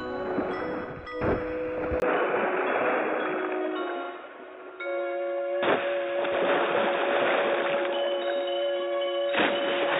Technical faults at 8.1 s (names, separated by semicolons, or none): input switched to a poorer device